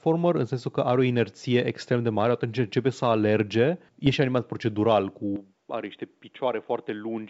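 At 4.07 to 4.15 s, right after "atunci începe să alerge" and before "animat procedural", there are bit errors on an ADPCM link. A few flipped bits corrupt the decoder's step size and predictor, so each error rings on briefly instead of clicking once. The result is a rough, gritty burst of pops with quick level wobbles, spread over five frames. Unlike a lost packet, the sound never drops out or repeats; it is damaged in place.

From 5.36 s to the end, after "animat procedural", the input was likely switched to a poorer device. Nothing survives above 3.8 kHz, the level falls by about 5 dB, and a faint new noise floor appears. The earlier G.722 sound reached well past that point. A narrowing caused only by the codec would not bring a new tone, level and background noise all at once, with no gap at the switch.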